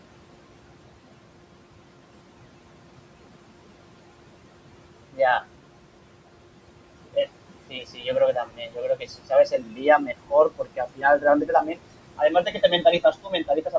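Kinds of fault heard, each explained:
Noise suppressor artifacts: The suppressor is pulling the room's steady background down by about 21 dB, band by band, frame by frame. The gaps go quiet and the noise comes back up under the speech.
Speech cut by the noise suppressor: In six spots between 5.11 and 13.75 s, the suppressor mistakes bits of speech for noise and ducks them about 20 to 22 dB. Soft endings and quiet stretches sound swallowed, worst around 8.33 to 10.33 s, where roughly a second and a half thins out.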